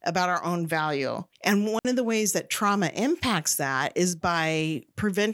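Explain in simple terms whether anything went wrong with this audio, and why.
Yes, one thing went wrong. At about 1.79 s the speech suddenly cuts out for roughly 60 milliseconds, until 1.85 s, just before "of the ways that". This is a digital wireless dropout. The radio link carrying the microphone signal lost too much data for a moment. Instead of playing damaged sound, the receiver briefly muted. That is why you hear a clean gap of near silence, with no crackle or hiss around it.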